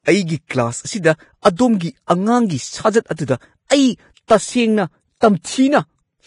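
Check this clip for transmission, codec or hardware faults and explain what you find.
Two codec faults are present: heavy lossy compression across the whole recording, and three pre-echo events on sharp onsets.

Vorbis compression runs from start to finish. Nothing remains above 10.6 kHz, and the treble that survives sounds hissy and grainy, with roughened tones and softened attacks. The likely cause is a Vorbis encode at a low bitrate, around 30 kbps. At that rate the encoder lowers its cut-off and quantises the upper residue so coarsely that fine spectral detail turns into noise of similar energy.

Pre-echo occurs at 1.56–1.59 s, 2.07–2.10 s and 4.28–4.30 s. In each case a short burst of hiss lasting about 24 to 30 ms arrives just before a sharp speech onset, and the onset itself sounds smeared. The transform coder spreads its quantisation noise evenly over the whole block. When a transient lands late in a block, noise sized for the loud part also fills the quiet stretch just before it.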